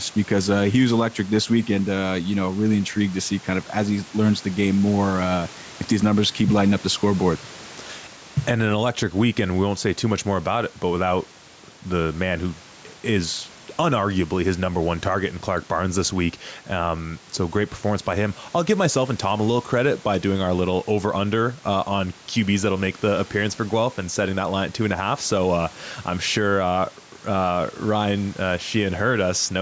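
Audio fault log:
throughout gain pumping: gain swings down about 10 dB under loud speech, likely a fast limiter on excessive gain; flattened waveform.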